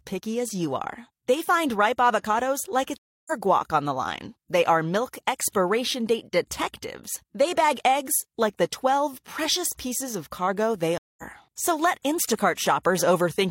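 At 2.98 s, after "find ripe avocados like", a stream reconnect drops the speech for 294 ms. The link broke and a fresh decoder restarted. Speech resumes at "guac on the line", skipping roughly 0.3 s. At 10.98 s, after "pieces of cargo they", another 200 ms gap skips roughly 0.2 s.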